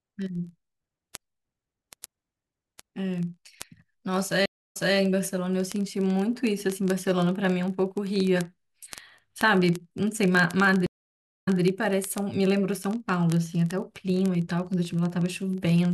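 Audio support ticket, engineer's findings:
Word clock ticks, 0.10 to 15.92 s: sharp ticks of uneven strength at a steady rate of about fifty per second, several hundred in all. The likely cause is an unlocked digital input, with the receiver's clock off by roughly 0.1%, slipping one sample each time. The fixed rhythm rules out random crackle.

Stream reconnect, 4.46 to 4.96 s and 10.86 to 11.62 s: gaps of 295 ms and 603 ms of silence. The decoder restarts mid-stream after a dropped connection and server resend, so playback resumes 209 ms and 157 ms earlier, replaying speech. A plain dropout would skip ahead rather than repeat.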